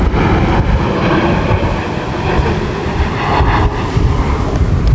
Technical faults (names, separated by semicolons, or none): gain pumping